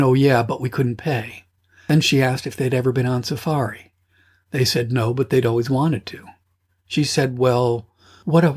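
Nothing stood out as a technical fault on listening to this speech recording.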